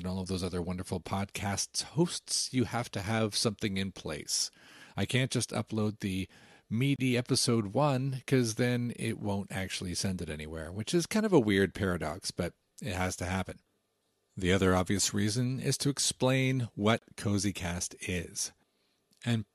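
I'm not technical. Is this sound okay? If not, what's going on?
No. There is a gap at a join of encoded pieces at 6.96 s and again at 16.99 s, about ten seconds apart. Each time the speech briefly drops into silence, about 29 ms and then 31 ms, and resumes exactly where it left off. The recording was compressed in separate chunks and then glued together, and each chunk kept a sliver of blank padding at its edge. Those slivers leave short holes with blurred edges.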